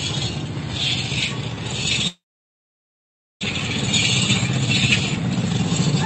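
From 2.07 s to 3.45 s the sound trails off into a brief fading buzz and then near-silence for about 1.2 s before resuming further on. This is likely a long network dropout: the receiver concealed the gap, but roughly a second of audio never played.

From 5.16 s to 5.95 s the sound rushes at about 123% speed with unchanged pitch. This is a jitter buffer speed-up, trimming pitch-period slices to shed a couple of tenths of a second of backlog.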